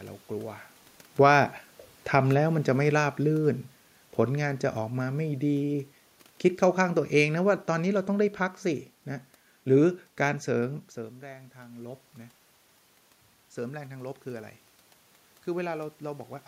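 A speech recording with automatic gain falling from 1.07 s to 8.37 s. The gain control judged the input too loud or its background noise too strong and backed off slowly. The level sinks by about 8 dB over those seconds. The room noise drops with it, since both pass through the same gain. The level changes near 0.5 s and 10.5 s come from the talker moving relative to the microphone.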